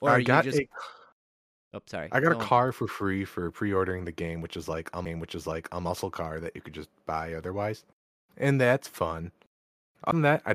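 CD skips at 5.05 s and 10.11 s: the laser jumped to a different turn of the disc's spiral, so playback mutes briefly, a few milliseconds at first and about 15 ms the second time, then resumes elsewhere, heard as a tick and an abrupt jump in the speech.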